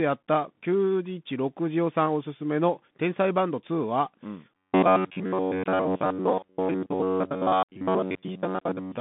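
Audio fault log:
Throughout: Bluetooth CVSD headset codec. The speech passes through a narrowband line from about 150 Hz to 3.6 kHz, with nothing above 3.8 kHz, which fits a 64 kbps CVSD stream. The damage is plainly audible: s sounds turn scratchy, loud bright sounds break up as the one-bit delta steps fail to keep pace, and a grainy hiss sits under everything. A spectrogram shows a hard ceiling near 3.8 kHz over a speckled noise floor. The waveform looks stair-stepped and slope-limited on sharp attacks.
4.57 to 9.00 s: robotic sound from repeated short buffers. From here to the end, the speech becomes a rigid, metallic buzz at 93.8 Hz that still roughly follows the speech. The likely cause is that fresh audio stops arriving in time, so playback loops a snippet of about 10.7 ms, the period of that buzz, and skips most of the real material in this stretch. A spectrogram shows evenly spaced horizontal harmonics at multiples of 93.8 Hz. 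The waveform shows identical short segments repeating back to back.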